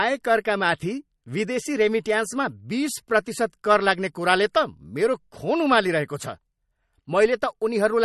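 Throughout, watery, swirling sibilants and a sharp spectrogram ceiling at 12 kHz, with flickering holes below it, mark MP3 compression, likely at a bitrate near 44 kbps.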